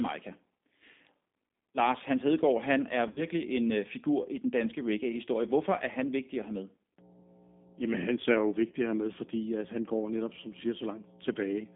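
G.729 codec damage runs through the whole clip. The speech is squeezed into a 200 Hz to 3.6 kHz band and rebuilt from a filter, a pitch predictor and a few pulses per frame. That makes it plainly rough and synthetic, which fits G.729A at 8 kbit/s.

VoIP packet loss concealed by the speech codec comes first between 3.08 and 3.26 s, after "han er" and before "en øh figur i". About 60 ms of audio goes missing, scattered over 80 ms with a longest gap of 50 ms. The decoder stretches its last pitch and filter into a fading smear, and the speech stays weak briefly as it recovers.

Mains hum enters at 6.99 s, just after "vigtig at have med", and lasts to the end. It is a steady 60 Hz tone with low harmonics, roughly 10 dB below the speech. It comes from power-line coupling through a ground loop or a nearby transformer.

A second concealed packet loss at 8.72 s is short, about 20 ms. It sounds as a brief blur under the hum, which points to two lost frames.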